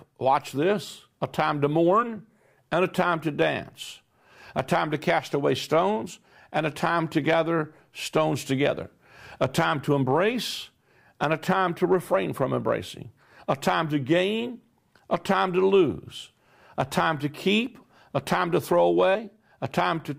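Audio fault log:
2.02 s and 19.14 s: compressed frames skipped. At each point the audio jumps forward by roughly 40 ms of sound, which fits a couple of whole frames that were missing or rejected by the decoder as damaged. The skipped stretch is simply never played, and the speech seems to lurch slightly ahead.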